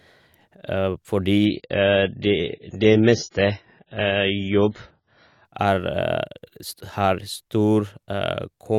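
From 1.45 s to 5.45 s the speech abruptly turns dull and watery, with nothing above 7 kHz and no gap at either edge. This is an adaptive stream at a lower bitrate, with the player switching to a far leaner encoding, roughly 16 kbit/s AAC, when throughput dipped.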